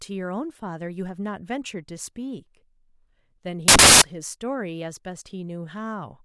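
Speech, broken from 3.68 to 4.02 s by samples built from the wrong bytes: the bytes of each sample are combined in the wrong order or alignment, so the fast-changing low bits dominate and the sound becomes loud, harsh broadband noise.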